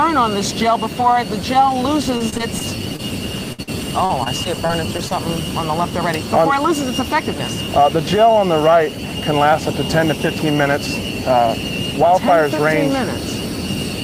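From 2.17 to 3.01 s, repeated packet loss (robotic sound) leaves six short gaps of up to 23 ms, each patched by repeating sound, giving choppy texture with pieces missing. At 3.53 to 3.60 s and 3.62 to 3.69 s come two bursts of packet loss: single held, fading stretches losing 60 and 40 ms, rather than rapid chopping. From 4.05 to 5.13 s the repeated loss returns, six gaps up to 42 ms, 140 ms missing.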